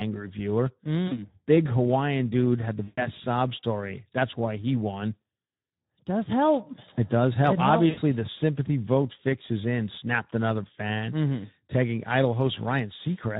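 Speex codec damage runs through the whole of this speech clip, plainly audible as a hoarse, noisy coarseness where the encoder has too few bits to model the excitation, a quality that fits a low setting near 11 kbps. VoIP packet loss concealed by the speech codec breaks in at 1.07–1.27 s, at 2.83–3.11 s between "dude had the" and "sob story", and at 7.89–8.00 s just before "helps the sympathy vote". In each gap the decoder stretches its last pitch and filter into a fading buzz or coloured noise to cover about 40, 140 and 80 ms of missing audio. The voice then stays weak and smeared for a moment after packets resume.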